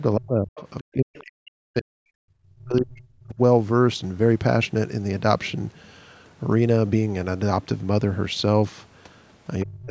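Speech suppressed in double talk first appears from 0.16 to 0.56 s. The talker's level sinks by up to about 40 dB and the sound thins and breaks into fragments. The likely cause is an echo canceller that heard both sides at once and, unable to tell the local talker from the loudspeaker echo, pulled everything down.

The other side's voice leaking through follows at 0.56 to 0.63 s. It is a brief scrap of a second voice about 20 dB below the talker, likely residual loudspeaker echo that the canceller failed to subtract from the microphone signal.

Suppression returns from 0.82 to 2.35 s, again dipping by up to about 40 dB for most of that stretch, with the talker repeatedly chopped and dulled, likely from the same double-talk confusion. Inside it, at 1.17 to 1.24 s, the other side's voice leaks through once more. It is a short, faint fragment about 25 dB down, likely uncancelled echo.

Speech suppressed in double talk hits again from 2.55 to 3.39 s, with drops of up to about 35 dB. 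The talker fades and loses its high end in pieces for roughly three quarters of a second, likely because the canceller once more held both paths down.

The last episode runs from 9.63 s to the end of the clip. The talker is muted by up to about 30 dB and cut off in fragments, likely as the canceller again treated overlapping sound as echo.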